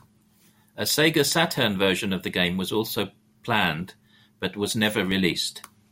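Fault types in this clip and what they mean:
Block of digital silence: A run of samples drops to zero with no fade, then the signal returns abruptly. At 5.11 s, just after "also planned but was", a hole of about 1.3 ms cuts the speech. It is heard as a tick or dip, which fits a 64-sample buffer that went unfilled.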